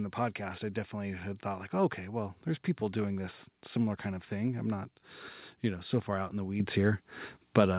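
At 6.6 s the microphone volume is stepped up: the call software judged the input too quiet and raised the device's input gain in a single jump of about 8 dB. Speech and background noise grow louder together and stay there, which is why it sounds like a sudden lift rather than someone speaking up. On a waveform the envelope steps abruptly taller; on a spectrogram every band brightens at once, all still stopping at the 4 kHz ceiling of the call path.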